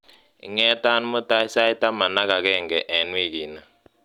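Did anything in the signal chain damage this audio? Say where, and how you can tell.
Yes. Sharp clicks at 1.45 s and 2.30 s are likely dropped samples in the driver or buffer stage: a handful of samples vanished, so the waveform jumps.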